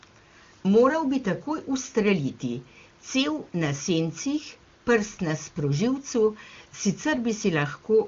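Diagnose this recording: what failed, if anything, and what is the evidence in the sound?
Nothing failed; no faults found.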